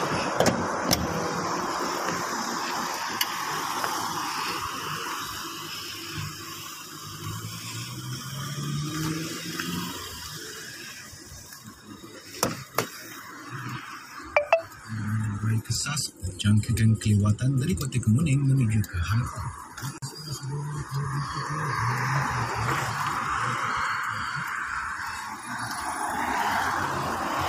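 At 19.98 s, a gap at a join of encoded pieces: encoder padding inserts 42 ms of silence, and unlike a dropout, sound resumes where it stopped.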